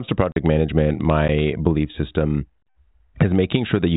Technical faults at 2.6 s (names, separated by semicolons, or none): block of digital silence